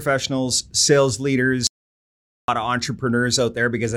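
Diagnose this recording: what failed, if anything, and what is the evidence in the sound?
Audio dropout to silence, input side: speech stops at 1.67 s; silence, no room tone, until 2.48 s, likely a disconnected input.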